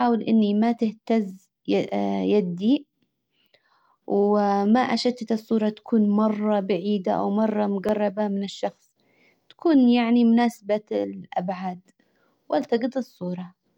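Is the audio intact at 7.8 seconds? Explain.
No, 7.8 s falls within the periodic USB or driver dropouts running from 1.89 to 7.89 s: brief ticks every 2.0 s as a blocked driver briefly replaces the speech with a couple of milliseconds of silence.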